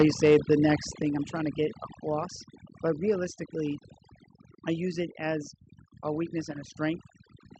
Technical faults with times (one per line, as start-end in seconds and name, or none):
0.00-7.60 overdone noise removal
0.00-0.55 microphone overload
0.02 microphone volume stepped down
1.02 microphone volume stepped down